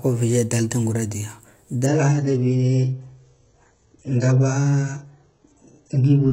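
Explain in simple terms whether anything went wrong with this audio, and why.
An adaptive stream at a lower bitrate took over at 1.86 s: the connection slowed, so the player switched without a gap to a much lower-quality copy until the end. From there the speech loses everything above 8 kHz and sounds dull, with more compression artefacts.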